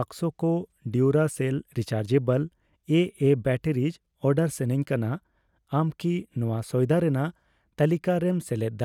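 No technical faults can be heard anywhere in this speech recording. There is no point in the audio that calls for a timestamp or a closer look.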